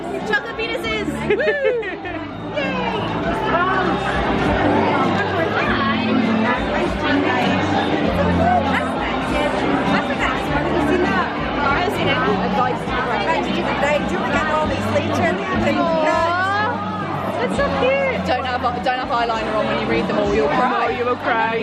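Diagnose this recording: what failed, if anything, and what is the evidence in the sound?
Lost LE Audio frames on the Bluetooth link at 17.22 s: one 7.5 ms frame concealed by the LC3 decoder, giving a brief noisy smear rather than the silent gap of a plain dropout.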